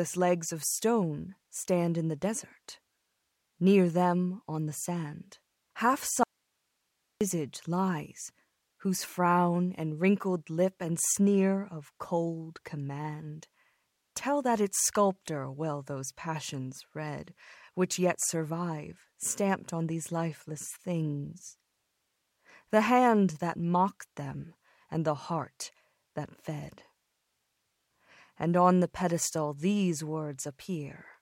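Right after "on the sand half", from 6.23 to 7.21 s, there's an audio dropout to a faint residue: the speech abruptly vanishes for about a second, leaving only hiss roughly 50 dB down, likely a live path that lost its feed.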